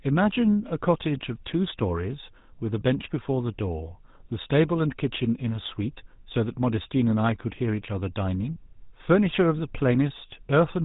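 From start to finish, the speech carries the sound of the GSM full-rate codec. Damage is plainly audible. The codec rebuilds speech from a vocal tract model driven by a sparse train of regularly spaced pulses. Much of the fine detail in the excitation is thrown away. The result is a buzzy, gravelly roughness. Nothing comes through above about 3.8 kHz, so the top end sounds dull. The coarseness fits a rate of around 13 kbps.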